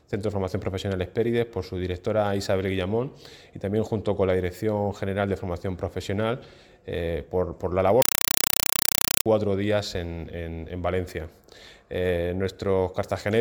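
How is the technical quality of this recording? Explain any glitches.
The recording has one serious glitch. From 8.02 to 9.26 s, a compressed stream is played as audio: an AC-3 bitstream, likely around 192 kbps, goes out unDecoded as samples. Each 4 ms data burst, repeating 31.25 times a second, becomes loud, chattering static replacing the sound.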